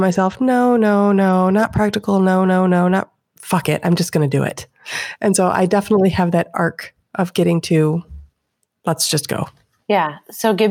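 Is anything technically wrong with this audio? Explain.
No, nothing is technically wrong with this audio.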